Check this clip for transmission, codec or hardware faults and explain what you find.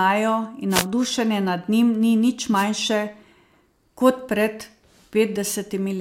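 Two brief wireless microphone noise hits break into the speech, from 0.70 to 0.86 s and from 2.54 to 2.66 s. In each, the analogue FM radio link fades as reflected copies of the signal arrive out of phase and cancel at the receiver, so the receiver's own noise rises for a moment. Each is heard as a short swish of static, roughly 0.16 s and 0.13 s long.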